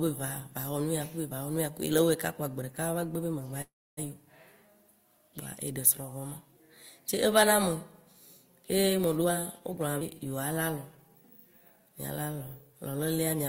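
At 1.98 s there's a quick bit of hard clipping: the peaks overdrive by about 2 dB and get sliced flat, giving a brief crackle.

Right after "be magba", from 3.61 to 3.99 s, you get a call audio freeze. The last sound trails off into roughly 280 ms of silence, likely because the jitter buffer ran dry waiting on held-up packets. The speech then resumes where it left off, so about 359 ms of delay gets inserted but nothing is lost.

Hard clipping shows up again from 5.87 to 5.90 s, harder this time at about 5 dB over. Those flattened peaks come across as a short, harsh crackle.

Between 9.19 and 9.83 s there's a jitter buffer speed-up. Pitch-period chunks get trimmed repeatedly, around 150 ms in total, so the speech rushes along at 119% speed while the pitch holds steady.

At 10.00 to 10.03 s it skips ahead. Roughly 200 ms of speech is dropped, leaving only an 8 ms bridge, so the two sides butt together almost directly.

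Finally, there are two jitter buffer slow-downs. From 10.53 to 11.10 s, about 44 ms of repeated pitch periods pulls the speech down to 93% speed. From 11.80 to 13.17 s, another 113 ms is added at 92% speed. Both stretches sound drawn out, at the same pitch.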